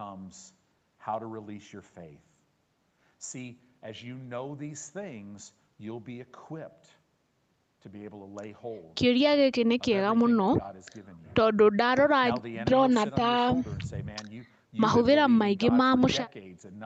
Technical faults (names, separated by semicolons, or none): none